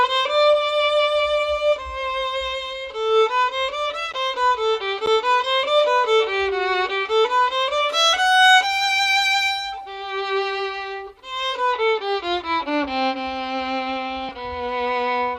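At 4.13 s and again at 5.06 s, the output buffer likely wasn't filled in time, leaving a block of digital silence about 11 ms long, which fits a 512-sample buffer. The audio drops abruptly to silence and returns, each time as a short tick.

At 14.29 s, compressed frames were skipped: the decoder lost or rejected roughly one 32 ms frame, so about 30 ms of audio is missing. The playback jumps forward.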